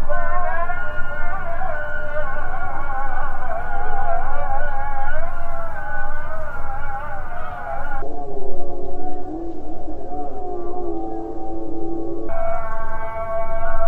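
From 8.02 s to 12.29 s the sound drops to half speed and falls a full octave, 12 semitones, a case of stereo read as mono. The left and right samples, which alternate in the stream, were taken one after another as a single channel, so each moment of the sound takes twice as long to play. A plain sample-rate mismatch would also halve speed and pitch, but here a fainter mirrored copy of the sound sits in the upper half of the spectrum.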